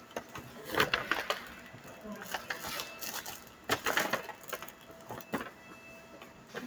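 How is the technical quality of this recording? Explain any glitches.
The quality suffers from one problem that runs throughout. Sustained sounds and tails keep sinking and swelling, by around 10 dB, while attacks pass; a speech-tuned noise suppressor is mistaking them for noise.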